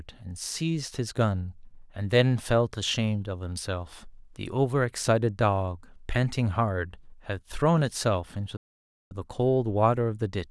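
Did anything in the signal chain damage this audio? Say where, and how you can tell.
Yes. The damage happens at the playback stage. The speech cuts out abruptly at 8.57 s and stays silent until 9.11 s, a gap of about 0.54 s. The silence breaks the flow mid-phrase rather than falling at a natural pause. That is a playback stall. The player likely ran dry of buffered data, or its output thread was briefly blocked, so nothing reached the output until it recovered.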